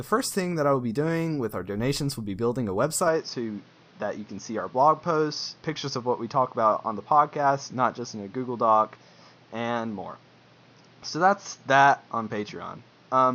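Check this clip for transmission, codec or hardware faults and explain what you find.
One fault runs from 3.08 s, right after "will be building a", to the end of the clip. The speech abruptly turns duller and boxier, with nothing above 6.6 kHz, and a new background noise sits roughly 30 dB under it. There is no gap and no obvious level jump at the change. This is likely an input switched to a poorer device, a narrower-band microphone or headset profile that brings its own coloration and noise.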